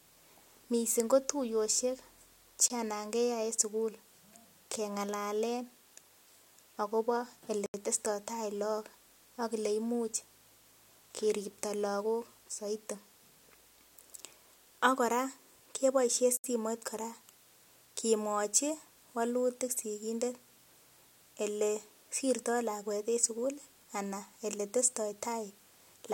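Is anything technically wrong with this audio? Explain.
Yes. There are three blocks of digital silence, at 2.68 to 2.70 s (20 ms), 7.66 to 7.74 s (80 ms) and 16.37 to 16.44 s (about 69 ms). In each, a run of samples drops to silence, which points to an output buffer not being filled in time. The cut is abrupt with no fade. The 20 ms block is the shortest, and the longer two sound like brief holes. Unlike a fade-out or concealed packet loss, nothing smooths or fills the gap.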